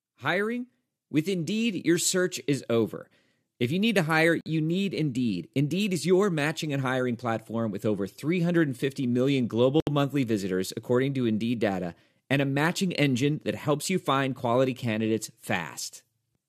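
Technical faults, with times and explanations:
4.41–4.46 s and 9.80–9.87 s, gap at a join of encoded pieces: the speech drops out for 51 ms, then 69 ms, with smeared edges, and resumes where it stopped. Separately encoded pieces were joined untrimmed, keeping the end padding and encoder start-up silence.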